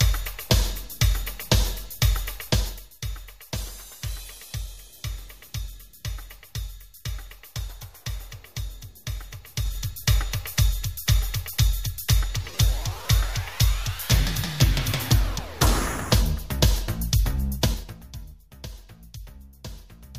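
From 2.42 to 2.97 s, the level drops by about 10 dB in audible 2 dB steps. This is zipper noise. The gain moves in coarse jumps, about ten per second, with no smoothing between them. Each jump leaves a small click, so a ticking rides on the sound. It returns from 9.47 to 9.85 s, rising about 10 dB in 3 dB steps. From 17.55 to 18.11 s, a fall of about 20 dB zips again in 3 dB steps.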